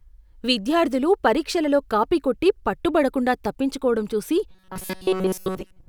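From 4.51 s to the end at 5.88 s, the speech turns into robotic sound from repeated short buffers: a rigid metallic buzz at 188 Hz. Most of the time is filled by repeating a slice of about 5.3 ms, likely because audio arrived too seldom. A spectrogram shows flat, evenly spaced harmonics. The waveform shows one short cycle copied again and again.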